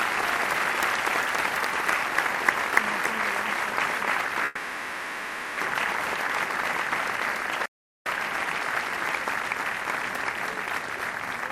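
At 4.45 s the sound turns into a fading buzz that lasts until 5.60 s: a call audio freeze, likely from delayed packets emptying the jitter buffer. The last sound is stretched to fill the 1.12 s, with no silence, and the audio then resumes where it stopped, now 1.12 s late.

From 7.66 s to 8.06 s the output simply cuts out for about 0.40 s, a playback stall, likely the player running short of data or being blocked. Unlike the freeze, nothing fills the gap. It is true silence before the sound carries on.

From 11.25 s to 11.49 s a jitter buffer speed-up plays the audio at 113% speed to drain excess buffered delay. Short pitch-period slices, about 40 ms in all, are cut out, so it sounds hurried without any rise in pitch. No gap or fill is heard.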